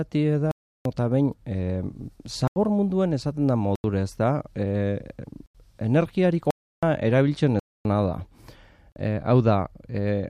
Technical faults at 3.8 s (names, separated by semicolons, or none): block of digital silence